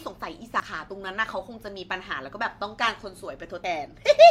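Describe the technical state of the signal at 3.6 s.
A dropped buffer (overrun) at 3.64 s: the speech jumps ahead, losing about 70 ms, likely because samples were overwritten before the program read them.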